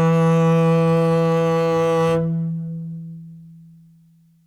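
A music clip with no audible technical faults.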